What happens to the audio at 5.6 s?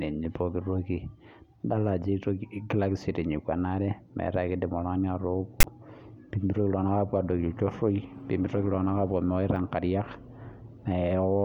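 At 5.60 to 5.64 s the speech cuts to a harsh, lopsided rasp then silence: file tags played as audio, text metadata and its zero padding read as samples.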